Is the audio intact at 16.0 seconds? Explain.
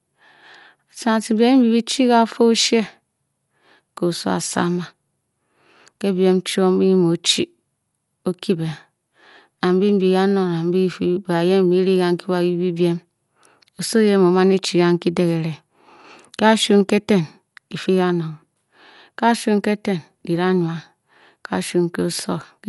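No. At 16.0 s the speech, like the whole clip, shows what is likely Dolby Digital compression run at a low bitrate, which fits something around 64 kbps. Starved of bits, the encoder narrows the band and leaves many frequency lines without mantissa data, so the decoder fills them with dither noise. Nothing is heard above about 11.5 kHz, so the speech sounds dull, with plainly audible rough, fluttering noise around its tonal parts.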